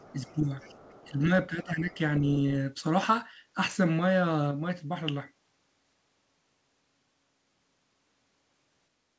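From the start to 0.35 s, a faint second voice sits under the speech, roughly 30 dB down. It is the other side's voice leaking through. The likely cause is a loudspeaker at this end feeding the microphone, with the echo canceller leaving a residue. It returns from 0.6 to 1.13 s, a little stronger, about 25 dB below the speech. Both scraps sound secondary.

Partly overlapping these stretches, the main speech is pushed down. This is speech suppressed in double talk. It happens from 0.12 to 0.53 s, from 1.09 to 1.3 s, and from 1.49 to 1.99 s. The deepest dips are around 10 dB. Together they add up to under a second of ducked speech. The likely cause is the echo canceller failing to tell the talker from the echo, so it turns both down. The voice sags and thins in patches.

At 4.51 s there is a sudden gain jump. Speech and background noise drop together by 4 dB with no ramp. They stay lower until 5.41 s, then step back up. 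Both edges are abrupt. The likely cause is a digital gain setting applied from one sample to the next.

Throughout, the audio has nothing above 8 kHz. That fits a G.722 call path at 64 kbps.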